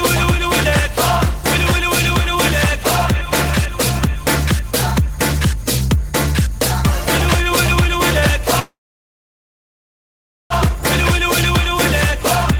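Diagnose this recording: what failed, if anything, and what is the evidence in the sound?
A call audio freeze occurs at the network stage, from 8.59 s to 10.53 s. The last sound is stretched briefly, then drops to silence for about 1.76 s, before the audio resumes exactly where it stopped. Nothing is lost; roughly 1.9 s of filler is inserted, pushing everything afterward later by that amount. The likely cause is packets delayed in transit, letting the jitter buffer run dry until they arrived.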